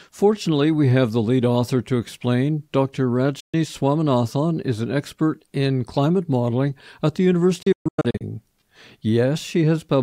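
Two digital broadcast dropouts mute the sound: a single hole from 3.40 to 3.54 s, about 128 ms, which fits four lost frames, and a scattered run from 7.62 to 8.22 s, about 352 ms lost in several holes, the longest 128 ms. Each one fades out and back in over 8 ms, and the programme resumes further on. Unlike packet-loss concealment, nothing is repeated or smeared over the gaps; the receiver simply goes silent.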